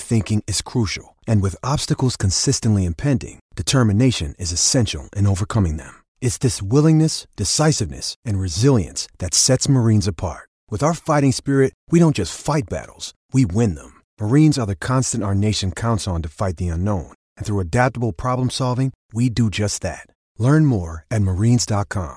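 Nothing stood out on listening to this recording of speech.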